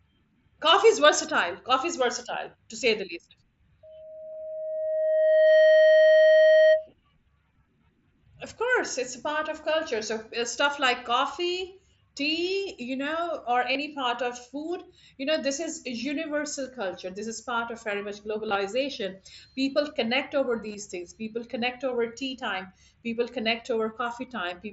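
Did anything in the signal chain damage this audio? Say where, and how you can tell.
Yes. Loudspeaker feedback squeal runs from 3.83 to 6.90 s in the acoustic stage, where a microphone picked up a loudspeaker it was feeding. A single tone at 627 Hz swells over roughly one and a half seconds and sits about 10 dB above the speech before it stops. At that frequency the round-trip gain through room, microphone and amplifier exceeded one, so the tone fed itself and grew.

Concealed Bluetooth headset packet loss appears at four places on the radio link between headset and phone. The first is at 4.32 to 4.35 s, under the squeal. The second is at 13.73 to 13.75 s, after "tea you know or" and before "part of". The third is at 18.49 to 18.55 s, after "part of very much". The fourth is at 20.68 to 20.74 s, after "connect over". Each gap lasts 22 to 38 ms. The last two are broken up across 60 ms, with runs of 15 and 22.5 ms, which points to several lost 7.5 ms mSBC frames. 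At each one the receiver filled in by repeating a recent stretch of waveform, leaving a brief buzzy hold and a slight warble as real audio resumes. The mSBC codec itself passes speech up to 8 kHz with light graininess.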